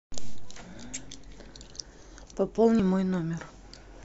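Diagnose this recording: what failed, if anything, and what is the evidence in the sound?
Likely a dropped buffer (overrun) in the driver: samples were overwritten before being read, so at 1.64 s and 2.80 s the speech jumps ahead roughly 20 ms.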